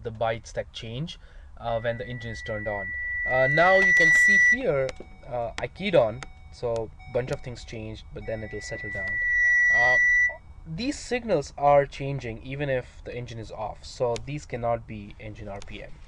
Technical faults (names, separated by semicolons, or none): loudspeaker feedback squeal